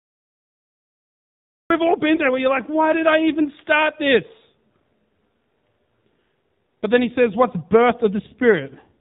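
This speech clip sounds muffled and buzzy from start to finish, with nothing above 4 kHz and a thin, synthetic edge on the voice. That is the AMR narrowband mobile codec at work. Its 8 kHz sampling removes the upper band, and its pulse-driven vocal-tract model, at a low rate consistent with about 7.4 kbps, leaves plainly audible coding damage. The clip is digital silence until 1.70 s, where sound appears abruptly in mid-flow with no attack or fade. This cut-off start means the recording or stream began late and caught the sound partway through. Between 2.16 and 2.23 s there is a brief dip or warble, consistent with a single lost AMR speech frame of about 20 ms. The decoder filled the gap by reusing the last good pitch and vocal-tract settings at reduced gain, then recovered.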